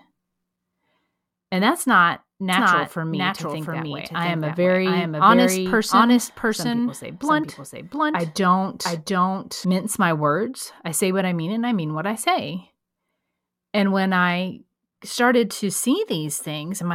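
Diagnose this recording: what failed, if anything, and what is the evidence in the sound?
A doubled audio track runs from 2.53 s to 9.65 s: the speech is mixed with a full-band copy trailing roughly 0.7 s behind at about equal loudness, with no decay or room colour, and both ends cut in abruptly. This points to the likely cause of a second, slower capture path or a misaligned edit. On a spectrogram, every speech pattern repeats intact about 0.7 s later; in the waveform, the duplicate's boundaries are hard edges.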